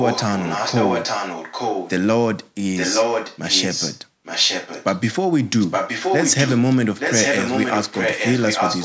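A delayed copy of the speech runs under it from 0.0 to 1.91 s, 2.75 to 3.99 s, 4.24 to 5.0 s, 5.6 to 6.62 s and 6.98 to 8.84 s: an echo leak, likely a far-end loudspeaker's echo canceller letting sound through. The copy trails by a steady 0.87 s, a little quieter at first, then as loud as the speech. Room reverberation would instead smear into a tail.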